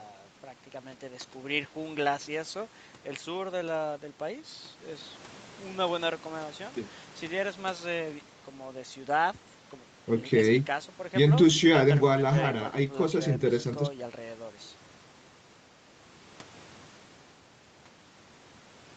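Nothing goes wrong anywhere in this speech recording; it simply carries the ordinary marks of a call, with the lowest bass trimmed off by the microphone processing and nothing above 8 kHz, which is just what the call codec's band limit would leave.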